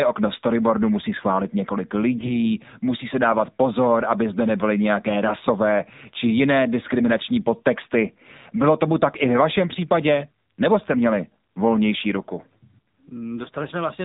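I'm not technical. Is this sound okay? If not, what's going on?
No. The voice sounds thin, muffled and buzzy all the way through, the mark of the AMR narrowband mobile codec, which squeezes speech into old phone-call quality. From 2.18 to 2.38 s it briefly turns hoarse and gargly: AMR bit errors, where a weak connection scrambled parts of the signal while the pitch stayed roughly intact.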